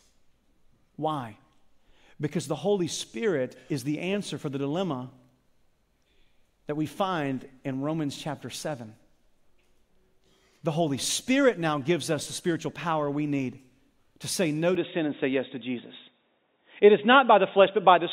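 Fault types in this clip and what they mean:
Input switched to a poorer device: the recording's input likely changed mid-clip to a lesser microphone or headset profile, so from 14.75 s to the end the speech loses everything above 3.8 kHz, shifts level by around 5 dB, and gains a new low noise floor, with no silence at the switch.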